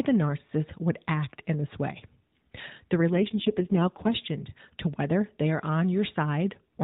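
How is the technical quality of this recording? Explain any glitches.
It's narrowband mobile-phone audio with one glitch. There's nothing above about 4 kHz and only light codec roughness, as you'd expect from an AMR narrowband call.

The glitch is an AMR rate drop from about 3.13 to 4.16 s. The speech turns buzzier and more synthetic for roughly a second, with no gap and no change in bandwidth, and then it cleans up again. That fits the link pushing the codec from its 12.2 kbps mode down to about 4.75 kbps, spending the freed bits on error protection. With far fewer pulses to model each frame, the voice loses detail.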